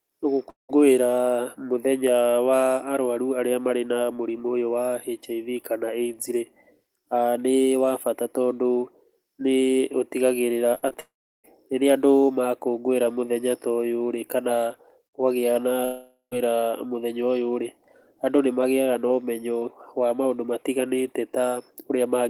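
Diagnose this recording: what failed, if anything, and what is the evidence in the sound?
Long network dropouts, likely from the network, at 0.49–0.71, 11.00–11.46 and 15.85–16.33 s: a fading buzz, then silence, then resumption. Each is one unbroken hole, not chopping.

Repeated packet loss at 10.75–10.96 s: four short network gaps, the longest 43 ms, each patched, giving choppy sound with pieces missing. It comes as rapid brief holes rather than one sustained silence.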